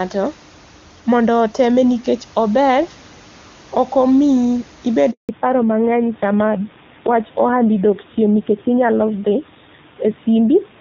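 A speech recording that suffers a handover gap followed by a fallback to narrowband. At 5.11 s the speech dies away within a few tens of milliseconds and stays silent until 5.29 s, an empty stretch of 180 ms. This is the sound of the call being passed between networks with no speech frames delivered during the switch, so whatever was said in that moment is gone. On a waveform it shows as a flat, near-zero run, and on a spectrogram as a clean vertical blank across all frequencies. From 5.29 s to the end, the fallback to narrowband removes all content above 4 kHz. The voice turns duller and rougher than in the first half, where the wideband HD Voice codec carried speech up to about 7 kHz with only faint coding damage, consistent with a high AMR-WB rate such as 23.85 kbit/s. The later sound fits the older AMR narrowband codec at a low rate, likely 7.4 kbit/s. The spectrogram shows the change sharply: energy reaching toward 7 kHz before the gap, then a hard ceiling at 4 kHz afterwards. 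Room noise sits about 26 dB below the speech throughout.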